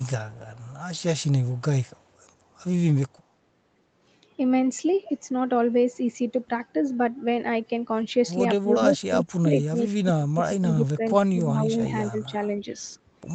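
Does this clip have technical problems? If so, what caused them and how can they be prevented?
Yes. At the far end, a loudspeaker's echo canceller likely let some of its microphone pickup through, producing an echo leak: a very faint copy of the speech, roughly 35 dB down and delayed 133 ms, trails the talker at 1.57–1.61 s and 1.82–2.09 s. Using a headset or retuning that device's echo canceller would prevent it.

When both sides spoke at once, the echo canceller likely couldn't tell the talker from loudspeaker echo and suppressed both. This is speech suppressed in double talk: between 8.62 and 11.89 s the speech dips by up to about 25 dB, about two seconds in all. A headset, or an echo canceller with better double-talk detection, would keep the talker's speech intact.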